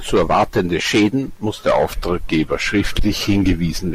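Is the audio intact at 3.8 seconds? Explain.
No. At 3.8 seconds the speech is still running about 6.4% slow and roughly 114 cents flat, a little over a semitone, from 1.67 s until it snaps back at 3.82 s. This is a drift correction step, likely clock-matching software abruptly lowering the playback rate to rebalance its buffer.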